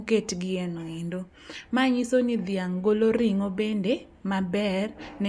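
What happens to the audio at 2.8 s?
Nothing goes wrong at 2.8 s; the speech runs on intact through that moment with no dropout, click or other fault.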